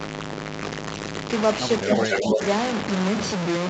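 The whole clip is buried in heavy grit that tracks the speech. It sounds like low bit depth without dither, likely a truncation down to something like 3 bits, so each sound snaps between a handful of coarse steps. The distortion sits roughly as loud as the speech itself, and because it moves with the signal it sounds like a rough, crunchy texture rather than steady hiss. The band still tops out around 8 kHz, as you'd expect from the call path.

At 1.83 to 1.89 s the speech briefly sags by around 10 dB. That's likely speech suppressed in double talk: with both ends active, the echo canceller couldn't tell the near talker from the loudspeaker return and turned everything down for a short moment.

Right after, from 1.89 to 2.45 s, there's an echo leak. A copy of the speech comes back about 266 ms late and at roughly the same level as the original, so it smears into a doubled, slapback sound. 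The far end's canceller likely didn't scrub its microphone pickup clean before sending it back.

Inside that stretch, from 2.07 to 2.4 s, the speech gets ducked again, more gently this time, only about 5 dB. It's likely the same double-talk suppression kicking in while the echo and the talker overlap, so that part sounds slightly sunk and pulled back.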